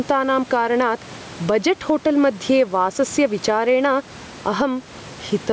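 Gain pumping runs the whole way through the speech. The room noise sits about 29 dB under the talker, and the gain swings by around ten decibels. Likely the input gain is cranked too high, with a fast limiter yanking it back down.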